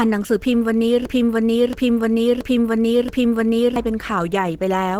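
Throughout the speech there is a grainy, hoarse, muffled texture, with rough noise standing in for fine detail. That sound is likely Opus compression in its hybrid speech mode at a low rate, consistent with about 16 kbps. A spectrogram shows noise-filled bands reaching about 20.2 kHz.

From 1.05 s to 3.76 s a broken-record loop takes over: one 0.68 s fragment plays four times back to back, and the speech that belonged there is lost. A waveform shows four identical blocks repeating exactly.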